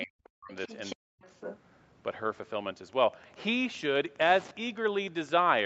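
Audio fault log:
0.01–0.05 s, 0.52–0.95 s and 1.26–1.59 s: other side's voice leaking through, a faint second voice about 15 to 20 dB under the speech, likely loudspeaker echo the canceller left behind.
0.06–0.21 s, 0.40–0.51 s and 0.95–1.23 s: speech suppressed in double talk, the speech dropping sharply, by around 40 dB, likely because the canceller attenuated everything while both sides overlapped.
2.88–5.65 s: Wi-Fi interference, a steady tick about 25 dB below the signal, repeating every 102.4 ms, from a nearby radio's beacon being rectified into the audio circuit.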